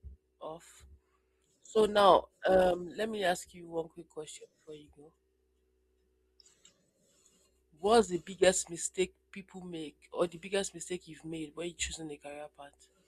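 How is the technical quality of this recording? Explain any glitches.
The quality is held back at the start by one fault: an adaptive stream starting at a low bitrate. From 0.0 to 4.0 s the speech sounds dull, with the treble thin or artificial and codec artefacts stronger. The player began on a cheap version of the stream to start fast, then switched up after gauging the connection. The sound fits roughly 24 kbit/s Opus rising to 64 kbit/s. Unlike a dropout or a network stall, the change at 4.0 s is a single clean step upward with no gap or repeat, and the quality stays improved afterwards.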